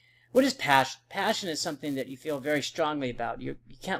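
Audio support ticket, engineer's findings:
Buzz riding on the audio from 0 to 2.8 s, steady at 345 Hz, getting louder as the signal gets louder. Looks like a filter restarted on every block. Some filter in the chain drops its state at each block boundary and starts again from silence, throwing a small transient each time. A 345 Hz rate fits a 128-sample block at 44.1 kHz. Worth checking how that filter carries its state between process calls.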